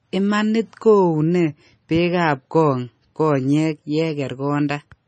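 Throughout the speech, a watery, swirly sound points to heavy, likely MP3 compression near 26 kbps; the spectrogram shows flickering gaps and nothing above 9 kHz.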